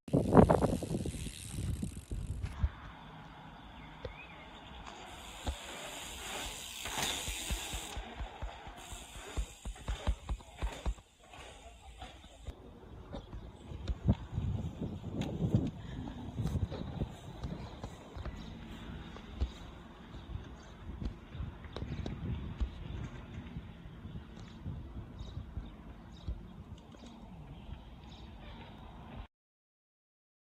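From 9.23 s to 21.23 s the adaptive stream fell back to a lower bitrate for twelve seconds, which fits a step down from 64 to 24 kbit/s Opus. The quality abruptly drops, codec artefacts thicken, and quality snaps back without any gap.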